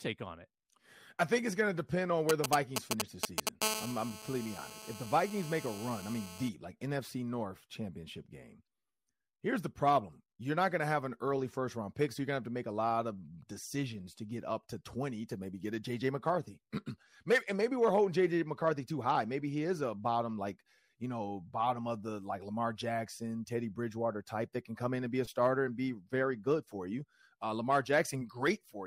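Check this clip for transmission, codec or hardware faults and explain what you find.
A nearby 2G mobile phone interferes with the speech in two consecutive stretches, first while it signals and then while it holds a call.

GSM signalling bursts, 2.29 to 3.49 s, just after "depend on": the phone sends short groups of radio bursts, and the audio circuitry rectifies them into sound. The result is a galloping dit-dit-dit of brief 217 Hz buzzes, somewhat louder than the speech.

GSM phone buzz, 3.62 to 6.49 s: the phone now transmits continuously at 217 bursts per second, which points to a call in progress. Rectified in the audio path, this becomes a hard, raspy 217 Hz buzz rich in harmonics, steady and about 9 dB below the speech.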